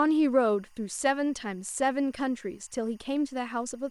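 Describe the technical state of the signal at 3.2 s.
At 3.2 s there's timecode bleed, and it runs under the whole clip, not just that moment. Linear timecode at 23.976 frames per second is leaking in, flipping between tones around 1 and 2 kHz, so you get a faint chirpy warble roughly 40 dB below the speech.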